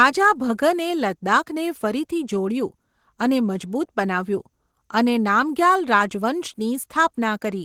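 Opus compression, present throughout the speech, sounds muffled and hoarse with grainy texture, likely from a low rate near 16 kbps pushing the encoder into its hybrid speech mode.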